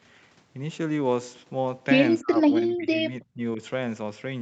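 An echo canceller likely mistook overlapping talk for echo, producing speech suppressed in double talk: from 2.21 to 2.4 s the speech nearly vanishes, by roughly 35 dB, then from 2.6 to 3.6 s it dips unevenly, by about 20 dB.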